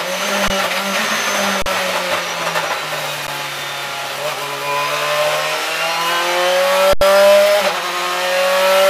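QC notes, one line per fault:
0.48–0.50 s, 1.62–1.66 s, 3.27 s and 6.93–7.01 s: underrun with held sample. The output buffer ran dry for 20, 40, about 12 and 80 ms. The converter froze on its last value, so the sound flatlines rather than clicking. Playback picks up where it stopped with nothing missing, so each restart is fairly soft.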